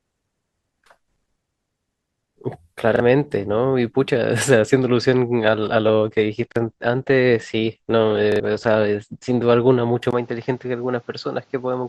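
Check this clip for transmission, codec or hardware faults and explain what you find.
Three kinds of fault are audible in this speech: repeated buffers, a drop to a lower-bitrate stream, and a switch to a poorer input.

Repeated buffer at 2.96, 6.52 and 8.32 s: late audio made the device replay its last 40 ms block, once, once, then twice. The result is a hard-edged stutter, not a dropout or a smeared glitch.

Adaptive stream at a lower bitrate from 5.39 to 9.39 s: a slowed connection switched playback to a leaner stream, consistent with a 64 to 16 kbit/s Opus drop. Nothing remains above 8.5 kHz, and the quality changes without any gap, unlike a device change.

Input switched to a poorer device from 10.11 s to the end: likely a change of microphone. After a 20 ms silence, the sound turns dull with nothing above 7.6 kHz, drops roughly 5 dB, and gains new background noise about 40 dB down.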